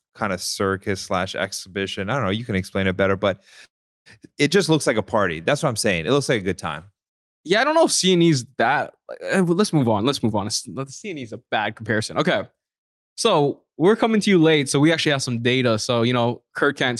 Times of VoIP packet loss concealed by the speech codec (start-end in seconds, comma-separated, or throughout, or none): none